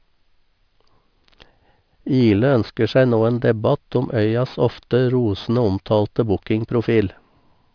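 Aliasing runs through the whole speech recording. The sound points to a downsample from 48 kHz to about 11 kHz with no low-pass filter in front of it. Energy above the 5.5 kHz fold point is not removed but reflected back below it at unrelated frequencies, roughly 30 dB under the speech. Sibilants come out gritty and metallic, and the spectrum runs hard against the 5.5 kHz edge.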